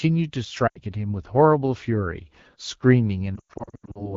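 At 0.67 to 0.80 s, lost AMR speech frames cost about 80 ms of speech. The decoder keeps repeating the last good pitch and vocal-tract settings at falling gain, so the speech drags briefly and sags. From 3.36 to 4.16 s, the losses are scattered, about 380 ms in total with runs up to 100 ms, so the speech warbles and fades in patches. A hard dropout would cut straight to silence. Here each longer run of lost frames drops to near silence within two frames. The wideband codec around the losses sounds clean, which fits about 12.65 kbit/s.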